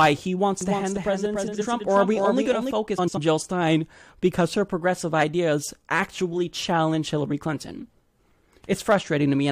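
From 0.61 to 2.71 s, a doubled audio track runs under the speech. A second full-band copy trails by roughly 0.3 s, about 5 dB quieter, with no room colour. It likely comes from a slower second capture path. It cuts in and out abruptly.

Inside that stretch, from 1.47 to 1.62 s, frames play out of order. Two neighbouring blocks of about 70 ms swap places, giving a garbled flutter. It happens again from 2.98 to 3.18 s, with blocks of about 93 ms. No time is lost.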